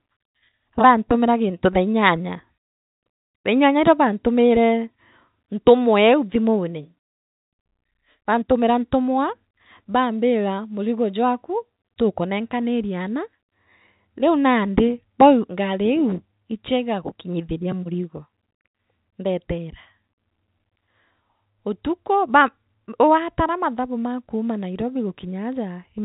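No technical fault turns up anywhere in this speech, which carries the narrow band of G.711 telephone coding with nothing above about 3.8 kHz.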